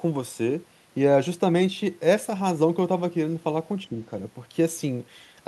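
An echo canceller likely mistook the talker for loudspeaker echo while both sides spoke at once, so this speech clip shows speech suppressed in double talk: from 3.87 to 3.97 s the voice briefly dips by around 10 dB, for roughly a tenth of a second.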